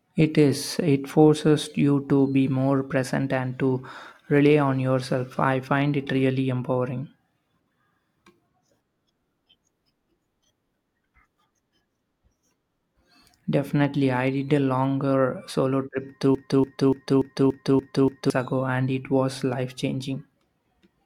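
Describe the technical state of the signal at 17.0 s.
A broken-record loop runs from 16.35 to 18.30 s: a 289 ms fragment of the speech repeats seven times back to back, exactly identical each pass. Most likely the player or stream stalled and kept resending its last held piece, so the intended audio there is lost.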